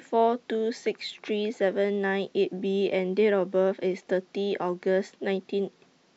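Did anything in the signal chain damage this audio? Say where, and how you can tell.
No, nothing in the signal chain damaged this speech.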